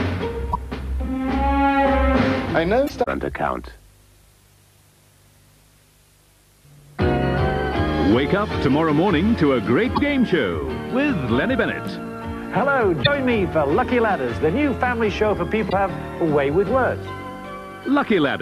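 Damaged data in a compressed stream strikes at 0.49, 2.84, 9.92, 13.00 and 15.66 s, each lasting about 70 ms. Corrupted bytes make the decoder misread those frames and lose sync until it finds a valid header, producing a brief chirp or squawk.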